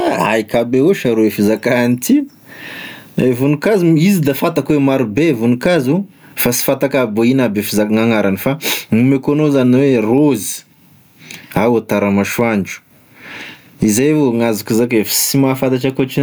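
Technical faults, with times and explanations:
Throughout: gain pumping, with a level swing of about 20 dB. Loud and quiet syllables sit unnaturally close together and the speech sounds flattened. The likely cause is input gain set far too hot, with a fast limiter or compressor clamping down on each peak and releasing in the gaps.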